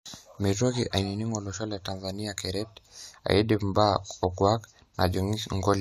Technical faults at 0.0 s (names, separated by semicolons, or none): none